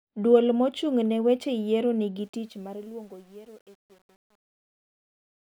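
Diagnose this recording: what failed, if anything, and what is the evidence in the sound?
A sample-format conversion or gain stage requantized the fade-out without dither, causing truncation distortion on the fade. From 2.17 s the decaying speech turns gritty, and from 2.69 s to the end at 5.43 s the grit is at its worst. That coarse stepping fits roughly 9-bit resolution.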